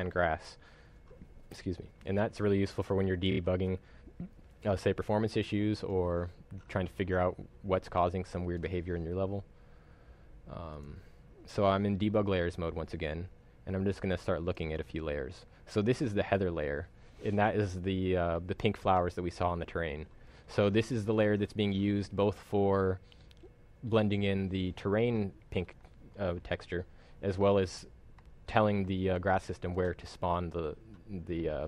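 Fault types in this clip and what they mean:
Repeated frames: one compressed frame, about 26.1 ms long (a length that fits an MP3-style 1152-sample frame at 44.1 kHz), plays three extra times between 3.31 and 3.39 s. This produces a brief stutter and lengthens the audio by 78.4 ms. Unlike a dropout, nothing goes missing or silent. Unlike concealment after packet loss, the repeats are exact copies recurring every 26.1 ms rather than a smeared or faded fill.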